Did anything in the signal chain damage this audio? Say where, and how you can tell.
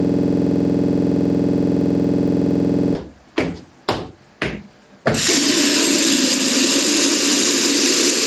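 Yes. From the start to 2.95 s, a single 46.44 ms slice of audio repeats exactly, dozens of times, at 21.5 Hz. This is a system hang loop: the driver or buffer stage stalled while the hardware kept replaying its ring buffer, which fits a 2048-sample buffer.

Throughout the clip, the gain swings by roughly 10 dB under each loud event, flattening the dynamics. This is gain pumping, likely caused by excessive input gain driving a fast limiter or compressor at the capture stage.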